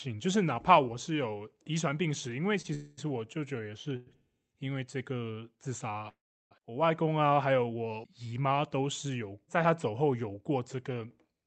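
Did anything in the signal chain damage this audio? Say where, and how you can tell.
Yes. At 2.61 to 2.66 s there is a short stall from a late packet at the network and jitter-buffer stage. One sound is held about 27 ms too long, then resumes unbroken. A spectrogram shows frozen, smeared harmonics.

Three call audio freezes follow, at 2.74 to 2.99 s, 3.96 to 4.09 s and 6.09 to 6.53 s, likely from delayed network packets. Each stretches the last sound into a fading buzz or hiss. The longest decays to 350 ms of silence before speech continues intact.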